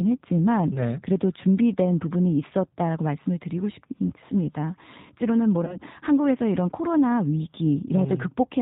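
Throughout, the speech has the rough, synthetic texture of the G.729 codec, which fits 8 kbit/s. Nothing above 4 kHz survives. At 0.74 to 0.81 s and 5.65 to 5.77 s, VoIP packet loss concealed by the speech codec stretches the sound into a buzzy tone or coloured noise that fades, which fits one lost 20 ms packet. The voice stays weak briefly afterwards.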